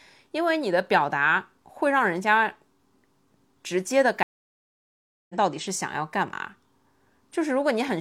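Stream reconnect from 4.23 to 5.35 s: the connection dropped, leaving 1.06 s of silence while the player reconnected and started a fresh decoder mid-stream. The speech resumes roughly a second further on, so that stretch of the feed is simply skipped.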